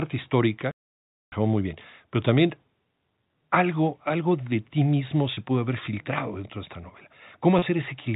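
A telephone-band speech recording, with nothing above 4 kHz consistent with G.711 coding, breaks off into a playback stall from 0.71 to 1.32 s. The output drops to plain silence for about 0.61 s, most likely because the player ran out of data or its thread was blocked. The gap is empty rather than filled with repeated sound, which sets it apart from concealment. At 5.34 s and again at 7.59 s there is packet loss with pitch repetition. Each time, roughly 30 ms of audio, consistent with a single lost packet, is bridged by repeating the last pitch period. Because the losses are so short, they come across as a brief, slightly buzzy hold on the sound rather than a gap, unlike the stall's clean silence.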